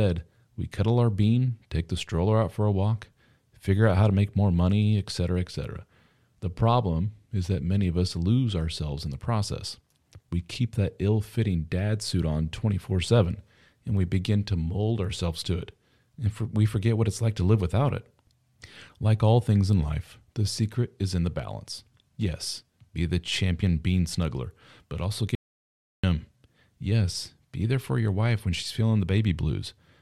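At 25.35 s, right after "bean snuggler but also", an audio dropout to silence cuts the speech for 0.68 s until 26.04 s, likely a lost input; unlike a quiet pause, even room tone vanishes.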